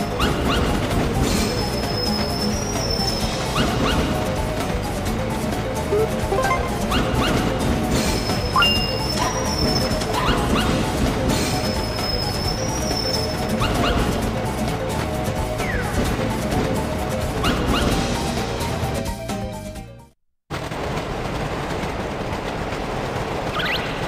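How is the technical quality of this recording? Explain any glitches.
One glitch stands out, at 13.65 s. Compressed frames are skipped there: part of the encoded stream was missing or rejected as damaged, so the decoder jumps ahead and roughly 70 ms of audio is never heard, which fits about three frames of around 26 ms each. The sound lurches forward at the join, marked by a brief blip. On a waveform the envelope changes abruptly at that point; a spectrogram shows a vertical seam where the two mismatched sections meet.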